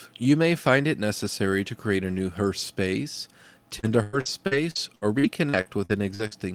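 Speech, with repeated packet loss (robotic sound) from 3.79 s to 6.33 s. Audio packets kept going missing or arriving too late, leaving about a dozen holes totalling 560 ms, the longest 99 ms. The receiver covered each one by stretching the preceding sound, concealing roughly a fifth of that stretch. Because the holes come in quick succession, the speech turns choppy and takes on a robotic edge, with fragments dropped out.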